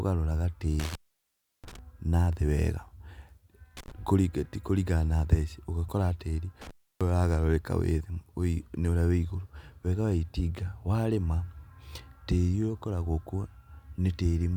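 At 0.80 to 1.79 s, 3.77 to 3.92 s and 6.61 to 7.10 s, an intermittent contact drops the speech for about 0.68 s, 0.08 s and 0.30 s as a loose connection opens. Crackle marks each edge. The waveform collapses to a faint hiss floor, and the spectrogram shows broadband vertical clicks.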